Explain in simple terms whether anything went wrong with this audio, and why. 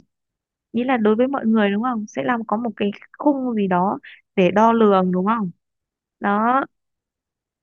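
Nothing went wrong; this recording has no audible faults.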